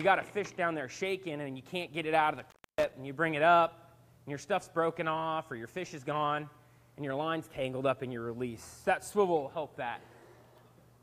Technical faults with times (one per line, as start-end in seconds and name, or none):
2.34-2.94 intermittent contact